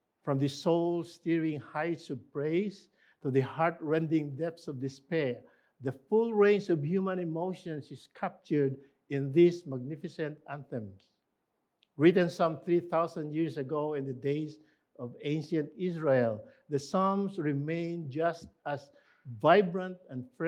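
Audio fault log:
Nothing stood out on listening to this audio.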